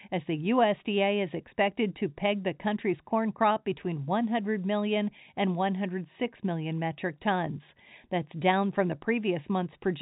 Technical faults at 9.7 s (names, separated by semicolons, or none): none